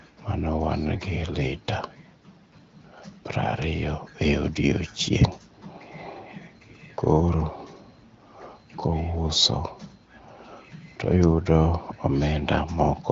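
Speech with no technical faults.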